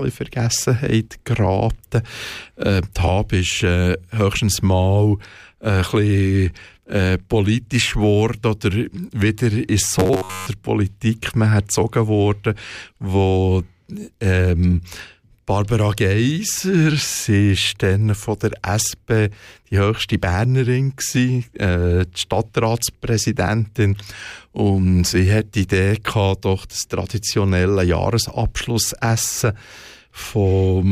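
10.00 to 10.47 s: robotic sound, a 93.8 Hz buzz likely from one 10.7 ms buffer repeating, seen as closely repeating waveform cycles and evenly spaced harmonic lines.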